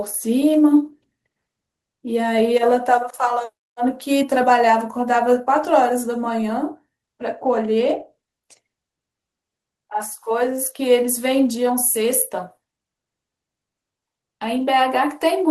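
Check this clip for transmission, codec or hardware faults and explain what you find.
Nothing faulty can be heard anywhere in the recording.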